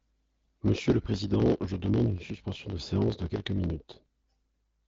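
The speech clip has a block size mismatch (truncated) from start to finish. One stage writes longer blocks than the next stage reads, so the tail of every block is dropped. Those regular cuts produce a buzz at 50 Hz, which fits 1024-sample writes. The speech runs 1.07 times too fast while keeping roughly its normal pitch. The AMR wideband path, consistent with 12.65 kbit/s, leaves nothing above 7.6 kHz.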